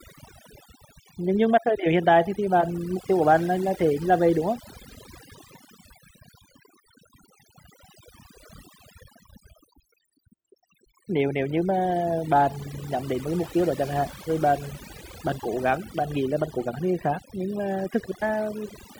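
Overdone noise removal runs throughout this speech recording, from start to finish. A noise reduction stage set too aggressively is pulling individual frequency bands down or shutting them off whenever their level sits close to its noise estimate. Because the quieter parts of the voice fall into that range, they are stripped away along with the noise. The background drops and breaks up into twinkling, warbling specks.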